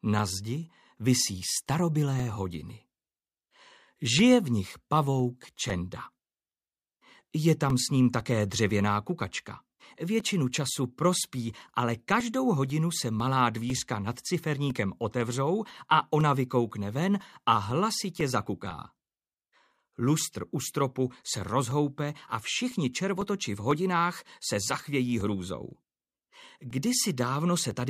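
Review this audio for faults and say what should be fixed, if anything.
Periodic USB or driver dropouts run from 0.19 s to 27.71 s, one every 0.5 s. At each interval something briefly stalls the USB bus or audio driver, and a couple of milliseconds of signal is lost and replaced with silence. The abrupt gaps come through as evenly spaced ticks wherever sound is present. To prevent this, disable or reschedule the background task that stalls the driver, and give the interface its own USB port.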